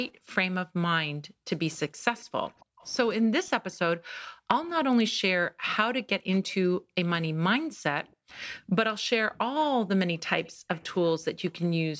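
From 0.11 s to 11.99 s, the echo canceller repeatedly clamps the microphone while the far-end loudspeaker is playing. This background gated by the echo canceller makes the room sound dip by up to about 40 dB, for roughly four seconds in total, then recover.

At 2.17–2.88 s, 6.49–6.54 s, 8.33–8.40 s and 10.45–10.80 s, a faint copy of the speech trails the original by 278 ms, around 30 dB down and nearer 25 dB at 6.49 s. This is likely an echo leak, where residual loudspeaker pickup slipped past cancellation.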